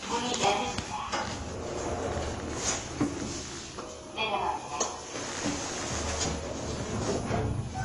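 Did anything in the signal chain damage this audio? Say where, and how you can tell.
Yes. Across the whole clip the sound is dull and smeared, with nothing above 11.5 kHz, and a plainly audible warbling, fizzy texture on sustained material. This points to the codec stage, likely AAC compression at a low rate, which fits roughly 32 kbps AAC-LC: starved of bits, the encoder lowers its cut-off and quantises the remaining bands so coarsely that gaps and artefacts open in the spectrum.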